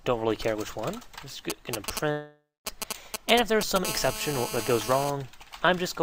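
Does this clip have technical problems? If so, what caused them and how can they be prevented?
Yes. From 1.50 s to 3.86 s there is a galloping dit-dit-dit of short raspy buzzes, about as loud as the sound itself. These are GSM signalling bursts. A nearby 2G phone was exchanging short groups of radio bursts with its network, repeating at about 217 Hz, and the audio circuit rectified that radio energy into audible clicks and buzz. Keeping phones switched off or well away from microphones, cables and interfaces prevents this.

Inside that stretch, from 2.11 s to 2.67 s, the sound stops being itself. A fading buzzy smear continues the last moment, then gives way to silence, and the audio resumes with about 0.54 s simply gone. This is a long network dropout, likely caused by packets arriving too late or not at all, so the receiver concealed the gap and then ran out of anything to fill it with. 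A more stable connection and a larger jitter buffer prevent this.

From 3.86 s to 5.10 s the ticking changes into a continuous, hard, raspy buzz, about 8 dB below the sound, rich in harmonics and unrelated to the material. This is GSM phone buzz. A nearby 2G phone was in a call and transmitting steadily at about 217 bursts per second, which the circuit rectified into a constant tone. Shielded, balanced cabling and a phone kept in flight mode or away from the equipment prevent this.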